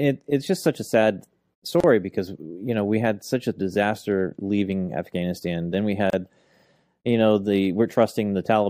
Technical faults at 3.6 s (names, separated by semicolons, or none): none